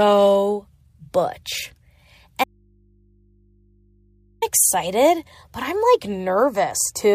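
At 2.44 s the speech is cut off mid-flow, and until 4.42 s, nearly 2 s, only a low mains hum remains, sitting about 40 dB below the normal level. Speech returns abruptly with "excited but I'm like". This is an audio dropout to a faint residue, likely from the signal feed breaking while the input stayed live. On a waveform the envelope collapses to a thin flat band. A spectrogram shows the speech harmonics vanishing, leaving only steady low hum lines.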